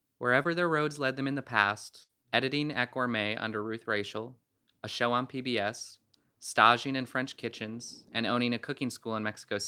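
At 0.43 to 0.47 s, just before "their roads led them", there is a short concealed packet loss. A sliver of the speech arrived too late to decode, and the receiver bridged it by extending the preceding sound for about 15 ms before rejoining the real signal, with roughly 20 ms of the original gone. It is heard as a tiny smear. On a spectrogram the sound briefly flattens and blurs.

From 2.03 to 2.11 s, right before "editing at", a burst of packet loss removes about 60 ms of audio. The decoder sustained the last sound for roughly 58 ms and let it decay, so a held, fading sound replaces the real speech before it jumps ahead. A spectrogram shows a frozen spectrum fading in level, then an abrupt restart. The waveform shows a shrinking envelope cut off by a sudden step.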